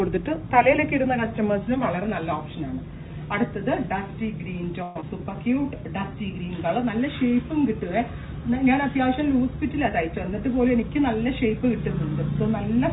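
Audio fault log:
4.83–5.04 s, long network dropout: The sound breaks into a fading buzz for about 0.2 s, with no true silence. A network dropout is the likely cause. The receiver filled the gap by extending the last sound, and about 0.1 s of audio never returns.
5.18–5.70 s, jitter buffer slow-down: Just after the gap, the audio drags at about 85% speed while the pitch holds steady. The receiver is rebuilding its reserve after the delay grew by roughly 50 ms. It repeats single pitch periods, stretching this stretch by 84 ms.
9.89–11.25 s, jitter buffer speed-up: The audio runs hurried at about 109% speed, with unchanged pitch. Too much audio had built up in the buffer. To cut the delay, the receiver trimmed short pitch-period slices, removing around 150 ms over this span.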